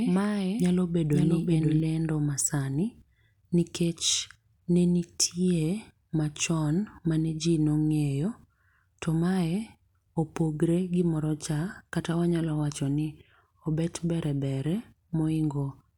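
From the start until 1.80 s, just before "ledo masani", the speech has a doubled audio track: a second, dry, full-band copy trails about half a second behind, roughly 5 dB quieter, and cuts off abruptly. It is likely a second capture path or misaligned edit.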